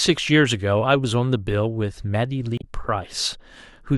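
At 2.58 to 2.64 s a brief glitch cuts through the speech: damaged data in the compressed stream made the decoder misread frames and lose sync.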